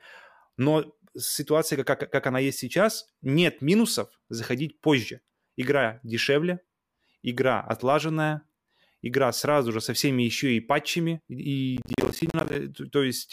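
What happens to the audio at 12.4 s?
At 12.4 s the speech is inside a burst of processor overload crackle running from 11.77 to 12.55 s, just after "всеми еще и патчами". The processor keeps missing buffer deadlines, and each missed block of roughly 10 ms drops to silence with hard edges, giving a gritty, tearing crackle. The waveform shows dozens of short flat gaps chopping the signal, and the spectrogram shows dense vertical broadband streaks at each cut.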